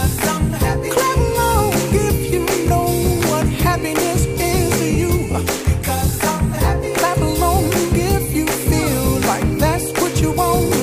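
Nothing here trips anything up, so there's no technical fault to point to anywhere in the audio.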